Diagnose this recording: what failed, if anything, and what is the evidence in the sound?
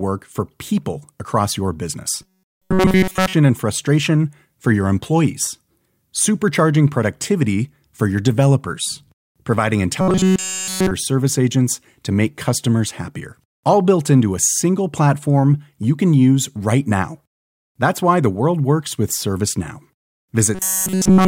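Three stretches of the speech collapse into a rigid, metallic buzz pitched at 188 Hz, from 2.22 to 3.34 s, 10.01 to 10.91 s, and 20.55 s to the end. The rough contour of the speech survives. This is robotic sound from repeated short buffers, likely a driver or buffer stage starved of new audio and looping a slice of about 5.3 ms for essentially the whole of each stretch while the real signal is skipped.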